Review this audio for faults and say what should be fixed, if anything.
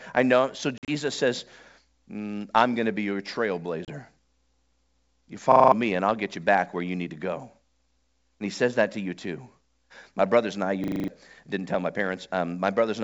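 Packet loss on an ADPCM call occurs at 0.78 to 0.92 s and again at 3.85 to 3.90 s. The first is a cluster of hard-edged gaps totalling 80 ms over about 100 ms, the longest 50 ms, which fits roughly seven lost packets. The second loses 30 ms. Silence fills each gap, and the receiving ADPCM decoder's predictor and step size drift from the sender's, so the sound re-enters slightly distorted before recovering. Adding packet loss concealment and resetting decoder state after a gap would prevent this.

A system hang loop appears at 5.52 to 5.72 s, ending just before "me and I'll get", and at 10.84 to 11.08 s, between "brothers and I" and "didn't tell my". In each, a 40 ms slice repeats exactly, five and then six times, at 25 Hz, giving a rapid mechanical stutter. The processing stalled while the audio hardware kept replaying the same ring buffer, so about a fifth of a second of real audio is missing each time. 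Fixing the driver or host stall, or making the output mute on underrun rather than recirculate, would prevent this.

The G.722 wideband coding at 64 kbit/s itself adds at most faint damage.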